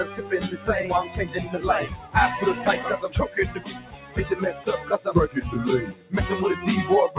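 A noise suppressor applied to music or sounds is at work across the whole clip. A speech-oriented suppressor stayed active, treating sustained tones, ambience and reverberant tails as background noise and pulling them down. Sharp onsets pass while anything held sinks, so the level swings by something like 10 dB and the sound pumps and thins. All of this sits inside a narrow call band with nothing above 4 kHz, which fits G.711 mu-law at 64 kbps.

Sound cut by the noise suppressor appears in three places: 1.93 to 2.15 s, 3.54 to 4.17 s, and 5.9 to 6.13 s. Each time the suppressor classed the ongoing sound as noise and gated it harder than its surroundings, with drops of about 10 dB in the first two and about 11 dB in the last. The longest, around 3.5 to 4.2 s, lasts roughly 0.7 s. The sustained or decaying material there fades abruptly and its tail is clipped short, leaving a hollow dip before the level recovers.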